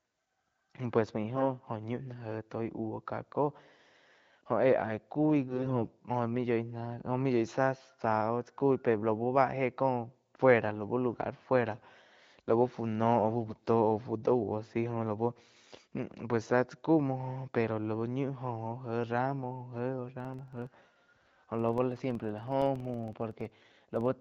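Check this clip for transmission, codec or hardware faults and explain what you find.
Two faults stand out in this speech, carried over what sounds like AMR wideband (HD Voice) coding at around 12.65 kbit/s, with its band above 6.4 kHz filled by shaped noise.

AMR bit errors occur at 1.36–1.44 s, 5.48–5.85 s and 13.44–13.64 s, hitting 4, 12 and 11 frames respectively. Flipped low-priority bits misplace excitation pulses and skew gain and spectral values. Pitch and level hold, but the speech turns hoarse and gargly, worst at 5.5 s. On a spectrogram, the harmonics smear into ragged, noisy bands.

The filter restarted on every block from 20.20 s to the end. Each block starts from zero state, leaving a small transient at its edge. This produces a 21.5 Hz buzz, which fits a 2048-sample block, and its strength follows loudness. The waveform shows evenly spaced ticks, and the spectrogram shows thin vertical lines.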